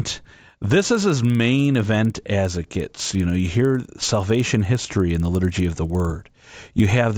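A regular ticking runs under the speech from start to finish, twenty clicks per second, and it sounds almost like a low buzz riding on the voice. It drops away in the pauses. This is a resampler restarted on every block. The 16 kHz to 48 kHz conversion was run on each 50 ms chunk in isolation, so the filter lacked the real neighbouring samples at every chunk boundary and left a small error there.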